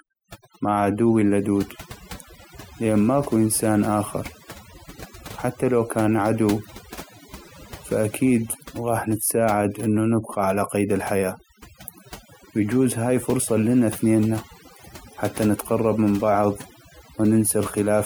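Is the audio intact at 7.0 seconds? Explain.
No. Overdone noise removal runs throughout, including at 7.0 seconds: aggressive noise reduction mutes frequency bands near the noise estimate, leaving twinkling specks in near-silence.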